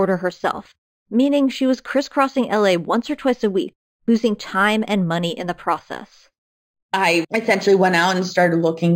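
Imaging from linear upsampling runs through the whole speech clip. The sound points to a rise from about 11 kHz to 48 kHz. The new samples were made by drawing straight lines between the old ones. That is a weak filter. The top of the original band is dulled. A mirrored copy of the spectrum remains above it, first between 5.51 kHz and 11.03 kHz, roughly 25 dB below the signal. It adds a light metallic shimmer to sibilants.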